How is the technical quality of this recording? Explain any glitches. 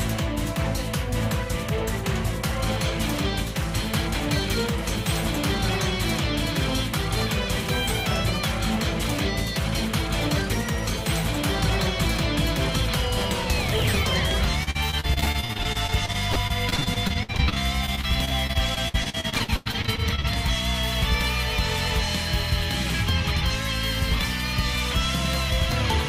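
The recording has one clear problem area. From 14.63 to 20.26 s the sound turns choppy, with small pieces missing. This is repeated packet loss: dozens of short dropouts, the longest 94 ms, were each patched by stretching the preceding sound, leaving about a quarter of that stretch concealed rather than genuine.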